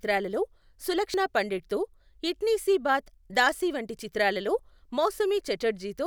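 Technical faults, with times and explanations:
1.14 s and 3.34 s, dropped buffer (overrun): the speech skips forward with no silence, first just before "పండిట్తో ఇట్నీ సీ బాత్", losing roughly 70 ms, then just before "దాసీ వంటి చిత్రాలలో", losing about 20 ms. The likely cause is audio being overwritten before it was collected, leaving the remaining edges butted together.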